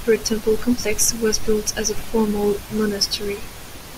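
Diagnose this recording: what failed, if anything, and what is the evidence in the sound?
Nothing failed in this recording.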